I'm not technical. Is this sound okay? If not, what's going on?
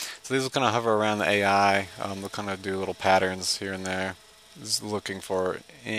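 Yes, it's okay: nothing stood out as a problem when listening to it.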